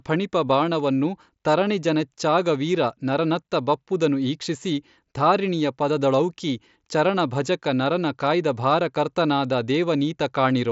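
At 0.48 s there is a brief concealed Bluetooth headset packet loss. About 15 ms of speech failed to arrive from the headset, a gap consistent with two lost packets, and the receiver filled it by repeating the best-matching recent stretch of waveform. Because the run is so short, it passes as a buzzy blip with a slight warble as real speech resumes. Through it, the wideband mSBC path carries speech up to 8 kHz.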